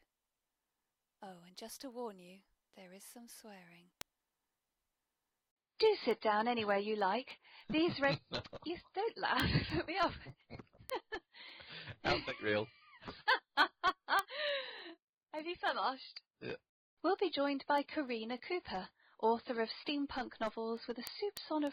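Sharp, uneven ticks recur roughly every third of a second from 0.12 s to 21.67 s, a word clock ticks fault: an unlocked receiving clock, drifting on the order of 70 ppm, drops or repeats single samples.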